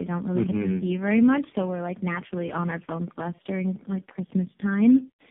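From start to finish the speech carries tandem speech coding: it has been decoded and re-encoded several times, each coder working on the previous one's damage. The roughness, muffling and warbly smearing fit about four speech codecs in a row, likely including low-rate AMR-NB near 6 kbit/s and CVSD stages, joined by G.711 links. Nothing remains above 3.5 kHz, so the sound is narrowband and dull as well as gritty.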